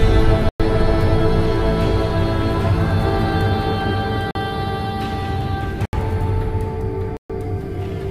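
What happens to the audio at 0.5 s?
At 0.49 s the sound drops into a block of digital silence that lasts until 0.60 s, about 108 ms. For that stretch, the samples have been replaced by zeros. The signal stops dead with no fade-out and resumes just as abruptly. At this length, the result is heard as a short hole in the sound.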